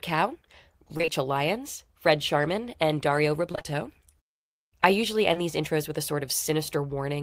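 Short concealed packet loss occurs three times back to back, at 0.97 to 1.01 s, 1.01 to 1.06 s and 1.06 to 1.10 s, each hole about 20 ms long. Audio for these moments arrived too late for the decoder, so the receiver patched each gap by extending the preceding speech and then blending back into the real signal. Because the three patches run one after another, the result is a brief smeared wobble lasting about a tenth of a second.

Repeated packet loss (robotic sound) follows from 3.52 to 3.76 s. Over this quarter-second, what sounds like four separate dropouts, none longer than about 21 ms, strip out roughly 80 ms of the speech. Each one is filled by stretching the sound that came just before it, and the next dropout arrives before the audio has settled. With close to half of the stretch synthesised, the speech turns choppy, and small pieces of it are missing.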